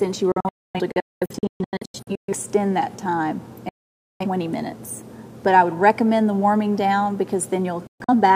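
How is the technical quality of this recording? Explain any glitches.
The recording is marred by repeated holes where the sound abruptly cuts to silence and then resumes. These are digital broadcast dropouts. From 0.32 to 2.33 s, several short gaps add up to about 1.2 s of silence, the longest 0.26 s. A single 0.51 s gap falls at 3.69 to 4.26 s, and from 7.87 to 8.14 s two brief gaps occur, the longest 0.13 s. The receiver muted whenever frames failed, with only a 3 ms fade, and the material sent during those gaps is lost.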